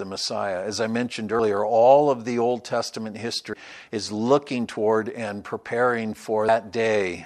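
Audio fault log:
1.39 s, 3.53 s and 6.48 s, compressed frames skipped: the speech jumps ahead by roughly 100 ms, 200 ms and 150 ms, a few whole frames at a time, consistent with about 26 ms frames.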